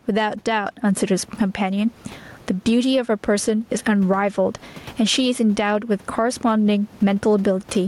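Gain pumping runs through the whole speech recording: the room noise sits about 36 dB below the voice, and the gain swings by around 15 dB, likely from excessive input gain hitting a fast limiter.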